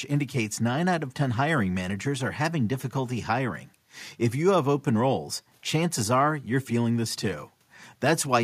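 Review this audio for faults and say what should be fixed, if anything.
Nothing in the recording needs fixing, as no technical faults can be heard anywhere in the signal.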